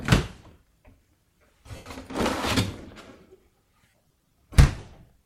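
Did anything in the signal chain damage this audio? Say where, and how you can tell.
Yes. Bluetooth LE Audio frames were lost on the wireless link, and the LC3 decoder concealed the gaps by replaying the last good spectrum with randomised signs, fading it after the first few frames. At 1.76 to 1.86 s, a gap of about 0.1 s, consistent with a run of 7.5 ms frames, turns into a noisy smear that tails off. From 3.90 to 4.33 s, shorter losses scattered over about 435 ms, the longest around 40 ms, leave repeated hissy blurs.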